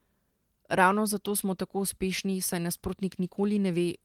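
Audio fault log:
Nothing stood out on listening to this speech recording.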